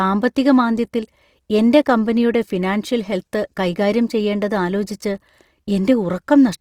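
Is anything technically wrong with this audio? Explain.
Yes. Throughout the speech, the high end sounds rough and grainy, with upper harmonics turned noisy. This is likely Opus compression in its CELT mode, filling starved bands with folded or noise content, consistent with about 24 kbps. A spectrogram would show full bandwidth but smeared, noise-like texture above a few kHz.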